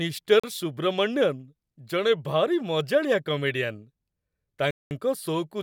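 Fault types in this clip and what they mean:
Bluetooth stall: at 0.40 s and again from 4.71 to 4.91 s, the speech drops to complete silence, first for about 39 ms and then for about 201 ms, before resuming. The likely cause is radio interference delaying packets on the wireless link, so the headphones' buffer emptied and playback halted until the retransmitted audio arrived. The longer second gap is the more obvious interruption, with the speech cutting out abruptly and then carrying on.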